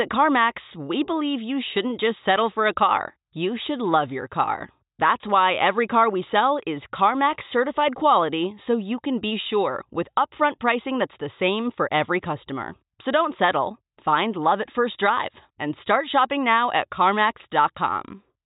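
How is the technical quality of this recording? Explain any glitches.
Good quality, with no glitches to report.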